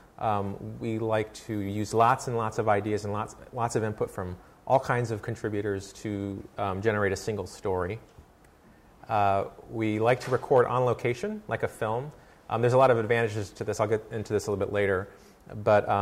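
No technical faults can be heard anywhere in this audio.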